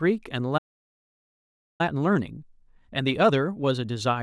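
At 0.57 s the speech halts mid-flow and the output sits silent until 1.81 s, about 1.2 s in all. This is a playback stall, likely the player starving for data or its thread being blocked.

From 1.81 s to the end, the speech runs hurried at roughly 1.15 times normal speed while its pitch stays natural. This is time-compressed catch-up, the player trimming its backlog by cutting and cross-fading short slices. A plain speed-up would also have raised the pitch.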